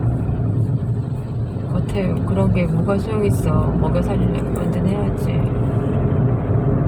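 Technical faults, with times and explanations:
No technical faults can be heard in this clip.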